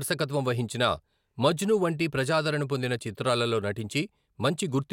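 No technical faults can be heard anywhere in the speech recording. Nothing in it stands out as a problem to locate or explain.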